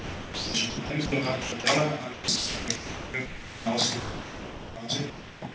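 From 0.00 to 1.12 s, 1.42 to 1.64 s and 2.14 to 3.66 s, a sender-side voice detector likely toggled between sending and not sending, so this is sound chopped by the voice detector. About 0.72 s, 0.14 s and 1.24 s of those stretches were replaced with comfort noise, making the sound choppy.

Between 4.00 and 4.76 s the detector likely judged the sound to be background and stopped sending entirely. This is sound dropped by the voice detector: the whole 0.76 s is lost, with steady comfort noise in its place until transmission resumes.

The chopping returns from 5.10 to 5.54 s, where about 0.35 s is filled with comfort noise. Through all of this the G.722 call path at 64 kbps carries nothing above 8 kHz.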